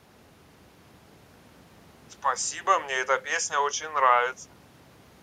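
No dropouts, clipping, glitches or other transmission faults are audible anywhere in this speech recording.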